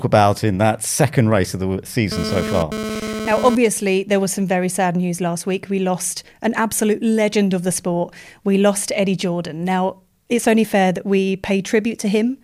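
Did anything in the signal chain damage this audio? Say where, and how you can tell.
Yes. From 2.12 to 3.55 s a hard, raspy GSM phone buzz sits on the audio at about 6 dB below the signal level. It repeats at about 217 Hz and ignores the sound underneath, and it appears only briefly, as a data transfer would. The damage is in the analogue wiring, where the audio circuit rectified a nearby 2G transmitter's bursts. A spectrogram shows a dense comb of harmonics spaced 217 Hz apart, and the waveform shows regular pulse trains.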